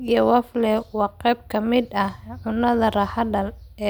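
No audible technical faults.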